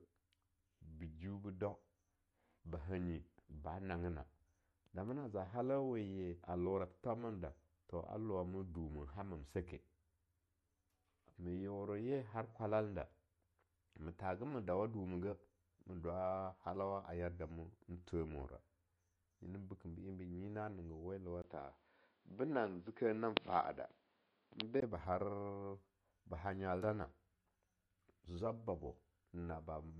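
MP3 compression runs throughout the clip. The speech has nothing above 12.5 kHz and carries plainly audible watery, swirling artefacts. This likely comes from an MP3 encoder working at a low bitrate, around 48 kbps, which fits the damage. Short of bits, the encoder removes the treble at a fixed cutoff and drops weaker frequency lines that flicker between frames. That gives sibilants a metallic chirp and softens the edges of attacks.

Input switched to a poorer device from 21.42 to 24.82 s, with a 20 ms silence at the changeover. During that span nothing is present above 5.2 kHz, so the speech turns dull and boxy, and a faint new noise floor appears, roughly 40 dB below the signal. Loudness stays about the same. The likely cause is the recording path swapping to a narrower-band microphone or headset profile, then returning to the original input.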